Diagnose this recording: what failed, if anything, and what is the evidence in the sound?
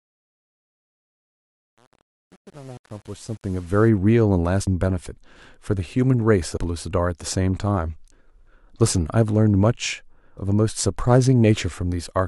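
Gritty distortion through the fade-in from 0.0 to 3.89 s, worst up to 3.69 s: truncation distortion on a fade. An undithered gain stage, fitting 8 bits, reduces the quiet waveform to coarse steps.

Skips at 2.77, 4.67 and 6.57 s, each losing about a tenth of a second, with the sound butted together: audio missing between chunks, likely a buffer dropping data at each 2-second chunk changeover.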